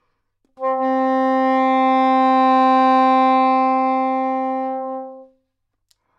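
Nothing here stands out as a technical fault; there are no dropouts, glitches or distortion to point to anywhere along the way.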